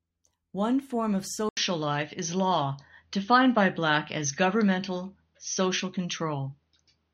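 Input switched to a poorer device at 1.49 s, after "form of": an 80 ms gap, then duller audio cut above 6.4 kHz with faint new background noise, likely from another microphone.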